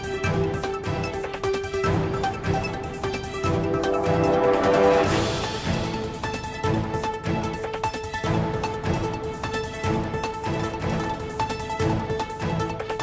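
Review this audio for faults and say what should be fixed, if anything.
Nothing needs fixing; no faults can be heard anywhere.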